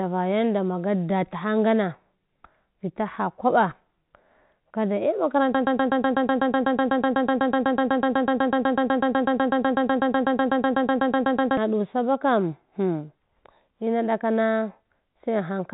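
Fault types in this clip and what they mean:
Broken-record loop: from 5.55 to 11.57 s, a 124 ms fragment of speech repeats exactly, back to back, 49 times, and the speech due in those six seconds never arrives; this points to a likely stalled player, encoder or stream resending its last buffer.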